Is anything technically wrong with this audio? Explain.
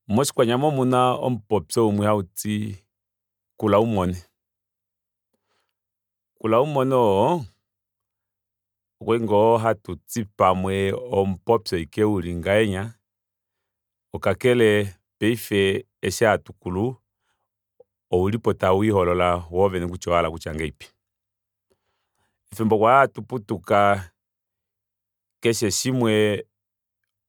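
No, nothing is technically wrong with this audio.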